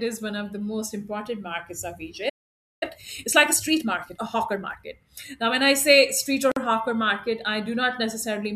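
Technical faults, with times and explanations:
2.29–2.83 s, playback stall: the speech halts mid-flow for about 0.52 s, likely the player starving or blocking, far longer than a join gap.
2.83–4.91 s, time-compressed catch-up: speech runs at 1.25 times speed with pitch unchanged, as small pieces are cut and cross-faded, unlike resampling.
6.52–6.56 s, gap at a join of encoded pieces: a brief 49 ms silence with smeared edges from encoder delay and padding, then speech continues exactly where it stopped.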